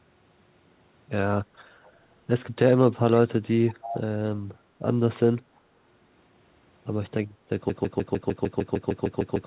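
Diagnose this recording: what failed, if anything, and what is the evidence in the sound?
Echo leak: a delayed copy trails the speech by 307 ms, faint at 1.83–1.92 s and 5.56–5.60 s, much stronger at 3.68–3.95 s. The far-end echo canceller likely let it through.

Broken-record loop from 7.70 s to the end: the same 151 ms fragment repeats back to back, likely a stalled buffer resending its last chunk.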